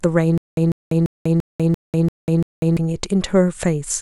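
Speech clip with stutter with silent gaps from 0.38 to 2.77 s: a 147 ms fragment repeats seven times every 342 ms, separated by 195 ms of digital silence, likely from playback stalls. The waveform shows identical bursts alternating with flat, silent gaps.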